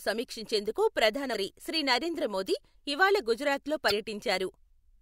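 Damaged data in a compressed stream shows up at 1.31 to 1.35 s, after "సమీక్షించేందుకు ప్రధాన", and again at 3.88 to 3.92 s, after "నరేంద్ర మోదీ ఇవాళ గుజరాత్లో". Corrupted bytes knock the decoder out of sync until it finds the next frame header, leaving a brief glitch in the speech each time.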